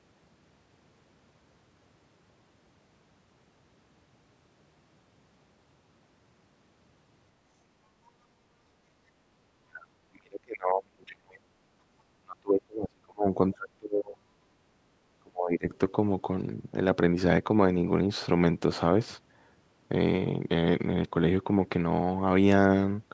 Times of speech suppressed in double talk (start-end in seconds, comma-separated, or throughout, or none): 9.27-11.54, 12.21-14.29, 15.18-15.67